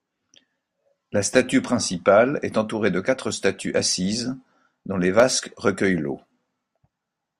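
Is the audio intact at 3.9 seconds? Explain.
No. At 3.92 seconds there is a block of digital silence lasting about 2.7 ms. A short run of samples drops straight to silence and then resumes. The length fits a 128-sample buffer that wasn't filled in time. There is no fade at either edge, so the waveform jumps abruptly each way. The hole is far too short to hear as a gap. It comes across as a brief tick or dip in the speech.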